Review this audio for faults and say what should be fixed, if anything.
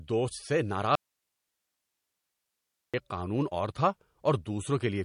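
The speech has passed through MP3 compression, likely at a low bitrate, with plainly audible damage throughout. Short of bits, the encoder cut everything above 10.6 kHz and let weaker frequency lines flicker on and off between frames. The speech therefore sounds dull and watery, with swirling on the s sounds and softened consonant onsets, which fits a rate around 40 kbps. To prevent it, encode at a higher bitrate or keep a lossless copy.

From 0.95 s to 2.94 s the speech drops out to a faint residue for nearly two seconds, likely because the input signal was lost while the path after the break stayed live. The speech cuts off abruptly, leaving only hiss roughly 55 dB below its normal level, and then returns just as suddenly, unlike a natural pause or a fade. To prevent it, secure the source connection and monitor the input for signal loss during recording.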